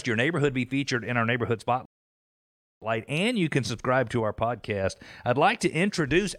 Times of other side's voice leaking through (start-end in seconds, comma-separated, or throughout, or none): none